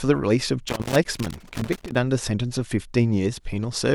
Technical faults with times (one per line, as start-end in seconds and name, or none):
0.68-1.95 loose connector crackle